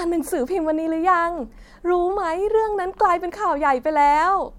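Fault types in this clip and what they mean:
No fault types are present in this clip.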